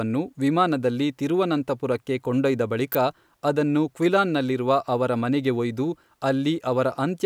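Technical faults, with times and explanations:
2.92 to 2.95 s, electrical switching spike: a sharp snap just after "ವಿಮಾನದಲ್ಲಿ ತಿರುವನಂತಪುರಕ್ಕೆ ಕೊಂಡೊಯ್ದ", likely a nearby switch arcing into the line, layered on top of the sound rather than replacing it.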